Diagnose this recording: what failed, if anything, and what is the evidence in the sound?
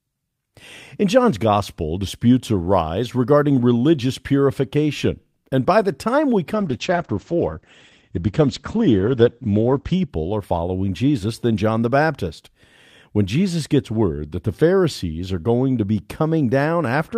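From 6.54 s to 10.15 s the speech turns muffled and watery, losing its top end, then regains its brightness. This is a call bitrate drop at the codec stage, driven by the network's bandwidth estimate. The encoder's rate fell from 40 kbps to 11 kbps and stayed at the floor for about 3.4 s. At that rate Opus narrows the coded band from 20 kHz to 8 kHz and quantises the remaining spectrum coarsely.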